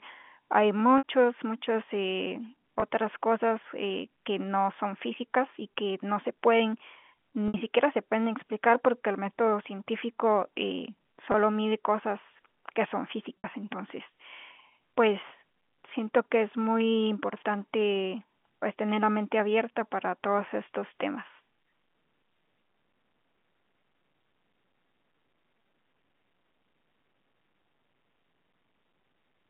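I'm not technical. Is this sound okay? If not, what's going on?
No. The speech has packet loss with pitch repetition: at 0.98 to 1.04 s, 2.80 to 2.82 s, 7.48 to 7.54 s, 11.32 to 11.34 s and 13.40 to 13.44 s, bits of audio went missing, and the receiver covered each gap by repeating the last fragment of voice. Unlike a plain dropout, which goes silent or clicks, the short ones sound like a brief buzzy hold, and the longer ones fade into silence before the speech returns. The longer gaps are about 60 ms, which fits three lost packets.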